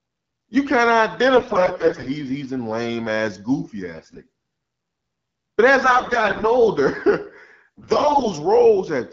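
AMR bit errors on a weak link flip unprotected codec bits, misplacing excitation pulses and skewing fine pitch, gain and spectral values. Pitch and level hold but the speech turns hoarse and gargly at 1.36–2.08 s (after "you kind of", before "he's in lame ass"), 3.95–4.18 s (after "in lame ass goofy"), 5.83–6.51 s and 7.77–8.29 s, with the first burst the harshest. Around these, the 12.65 kbit/s wideband coding stays clear.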